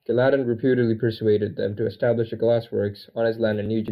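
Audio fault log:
throughout: channel delay (comb filtering), one channel lags a few samples, mono sum cancels around 7 kHz, sounding hollow or phasey; fixed spectrogram notch band.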